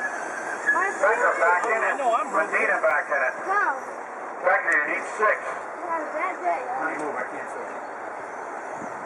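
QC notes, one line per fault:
2.90 s, block of digital silence: a single sharp tick where the sound drops to zero for about 2.7 ms and returns with no fade. The abrupt edges cause the click. The length fits one 128-sample buffer left unfilled in time.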